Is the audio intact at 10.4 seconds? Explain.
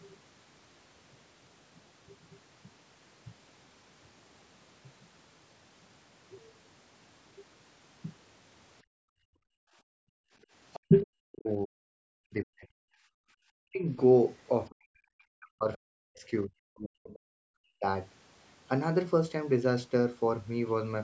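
No, 10.4 s sits right at the tail of a background gated by the echo canceller, running from 8.83 to 10.49 s. While the far end played out of the loudspeaker, the canceller clamped the mic down by about 40 dB, so the room sound just drops away and comes back as it lets go.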